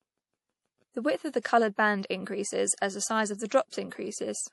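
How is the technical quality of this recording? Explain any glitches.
The recording carries plainly audible codec damage throughout, plus two brief pre-echo glitches.

MP3 compression, throughout: the sound has nothing above 11.5 kHz, a hard treble ceiling typical of an encoder starved of bits, which fits a low bitrate around 48 kbps. The damage likely comes from MP3 encoding. With so few bits, weak frequency lines are dropped and reappear from frame to frame, giving the speech a watery, swirling texture, with metallic chirps on sibilants and softened consonant onsets.

Pre-echo, at 1.42 s and 3.70 s: the first spans 28 ms after "width of the" and before "band increases as the". The second spans 26 ms after "the size of the". In both, a sharp onset lands late in a transform block, so quantisation noise sized for the loud attack spreads into the quiet instant before it. Each attack is preceded by a short hiss and sounds smeared rather than crisp.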